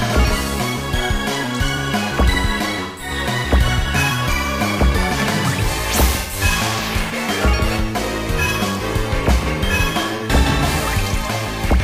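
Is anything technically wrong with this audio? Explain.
Yes, there is AAC frame loss with concealment at 2.83–3.11 s, 6.20–6.39 s and 10.16–10.23 s. The decoder fills the gaps of about 171, 128 and 43 ms, which fit four, three and one lost frames, from the previous spectrum, giving smeared, noisy patches that show as blurred, flattened bands on a spectrogram.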